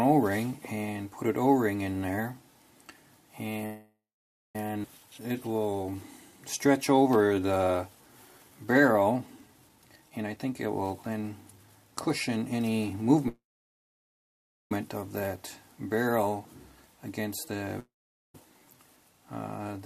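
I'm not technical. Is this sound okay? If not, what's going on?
No. At 3.65 to 4.56 s and again at 13.28 to 14.72 s the sound stalls. The last bit buzzes, fades to silence, then resumes where it stopped. This is a call audio freeze, likely from delayed data on the connection.

At 4.83 s it suddenly jumps forward. About 0.7 s is gone, which is a skip ahead: a chunk was thrown away to catch up.

From 5.06 to 9.60 s it plays slow and drawn out, at about 88% speed, with no change in pitch. The same thing happens briefly at 18.47 to 18.84 s. This is jitter buffer slow-down: the receiver was stretching the sound to build a reserve.

From 9.69 to 13.28 s it sounds hurried, at about 122% speed, with roughly 0.7 s trimmed away. A milder version, at 106%, comes at 18.97 to 19.60 s. This is jitter buffer speed-up, which shortens a backlog.

At 17.80 to 18.41 s the sound fades to silence and comes back later, with about 2 s missing. 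This is a long network dropout, likely from data that never arrived.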